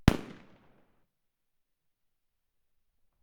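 At 1.03 to 1.05 s, a skip ahead: about 0.7 s of audio was dropped while later audio waited, so playback jumps forward with the two sides joined with no gap. From 1.13 to 3.19 s, a jitter buffer speed-up: the overfilled buffer trimmed short pitch-period pieces, about 0.15 s in all, so the sound runs at 108% speed without changing pitch and feels hurried.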